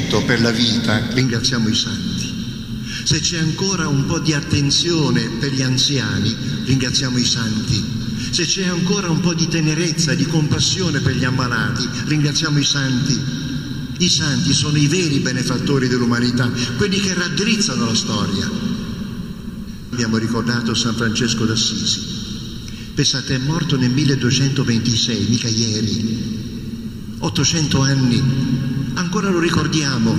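From about 1.2 s right through to the end there's channel delay (comb filtering): one side lags by about 0.7 ms before the mono sum, so cancellations start around 700 Hz and repeat evenly upward, leaving everything hollow and phasey.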